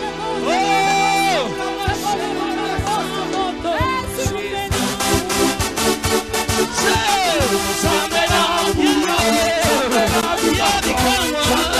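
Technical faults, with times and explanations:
No technical faults can be heard anywhere in the clip. Nothing in the sound calls for a time or an explanation.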